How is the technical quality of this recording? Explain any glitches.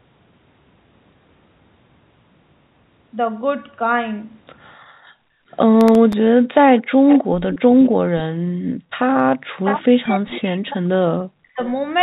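The recording has clear call-processing faults from about 4.8 s to 11.6 s, on narrowband audio whose content stops near 4 kHz, as a G.711 call path would leave it.

Background gated by the echo canceller occurs at 4.77–5.49 s, 6.33–6.97 s and 8.53–8.98 s. While the far end's loudspeaker audio was playing, the canceller pulled the microphone down by about 40 dB, so the room tone suddenly vanishes and then returns. On a waveform the noise floor collapses to near-flat for those spans. On a spectrogram the background texture blanks out across all frequencies, with hard vertical edges.

Processor overload crackle runs from 5.81 to 6.13 s. The processor missed a handful of very short buffer deadlines, each well under a millisecond, and each time old audio was replayed in place of new. That is heard as a brief gritty tear over the sound. A waveform shows tiny discontinuities and step edges at each repeat. 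A spectrogram shows thin vertical broadband streaks clustered in that third of a second.

Echo leak appears at 6.78–7.19 s, 7.52–7.89 s and 10.04–10.41 s. It is heard as a faint delayed copy of the talker, about 0.3 s late (301, 303 and 310 ms). The first two copies are about 15 dB below the speech and the last about 25 dB below. The likely cause is a loudspeaker-side canceller that failed to remove all of its pickup. On a spectrogram, fainter duplicate harmonic patterns trail the originals by that offset.

Speech suppressed in double talk spans 9.56–11.6 s, affecting roughly 1.5 s in total. The talker's voice dips by as much as about 40 dB and breaks up in pieces, likely because the canceller could not tell it apart from loudspeaker echo while both sides spoke. Waveform amplitude sags and chops irregularly. A spectrogram shows speech harmonics fading or cut into fragments, with the upper band thinning.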